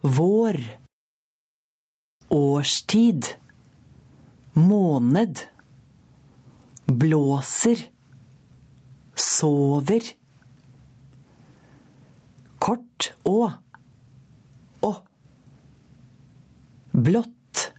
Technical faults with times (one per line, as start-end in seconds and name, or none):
0.00-17.78 gain pumping